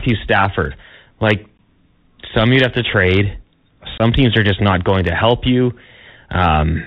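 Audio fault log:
throughout, Bluetooth CVSD headset codec: speech coded as adaptive one-bit up/down steps, consistent with a 64 kbps CVSD link, cuts everything above 4 kHz, leaving scratchy s sounds and granular hiss.
1.58 s and 3.98 to 4.01 s, unconcealed Bluetooth headset packet loss: headset voice packets dropped, 15 ms then 22.5 ms, replaced by silence or an idle pattern, leaving abrupt holes, then speech resumes briefly quieter.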